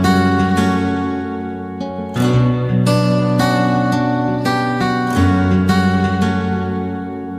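No technical faults are audible anywhere in the clip.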